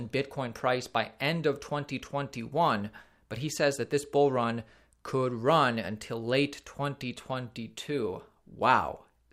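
A speech recording with no technical faults to report anywhere in the signal.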